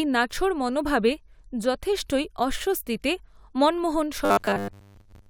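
Robotic sound from repeated short buffers affects this speech clip from 4.25 s to 5.29 s, right after "মনোভাবে যথেষ্টই অস্বস্তিতে মনমোহন". The voice becomes a rigid, metallic 100 Hz buzz, likely because audio arrived late and a 10 ms slice was replayed, covering most of the stretch.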